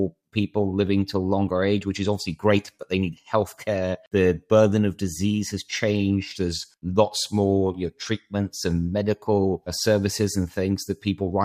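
No technical faults can be heard anywhere in this recording.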